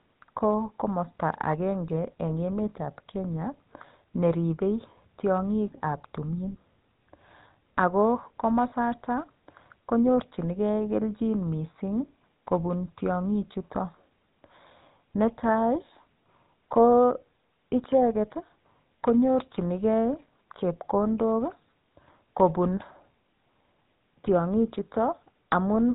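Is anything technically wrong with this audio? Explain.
Yes, two problems. The whole clip has gone through the GSM full-rate codec, and the damage is plainly audible. Nothing above 4 kHz survives, and the speech picks up a buzzy, gravelly roughness from the pulse-driven vocal-tract model, consistent with the old 13 kbps phone codec.

There's also a lost GSM frame at 8.70 to 8.73 s. It sounds like a single 20 ms frame dropped and patched by repeating the previous good frame, so you get a brief rough, metallic ring instead of a gap.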